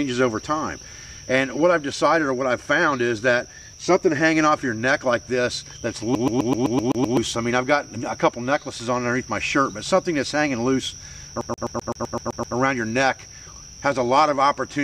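From 6.15 to 7.17 s, then 11.41 to 12.56 s, the CD gets stuck on one turn, the laser jumping back so a 0.13 s slice repeats eight then nine times with a quick mute each jump.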